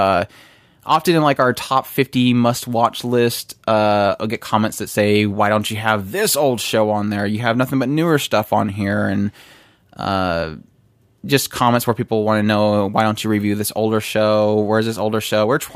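A short recording of speech, with nothing technically wrong to report. No time in it calls for comment and no cause needs pointing to.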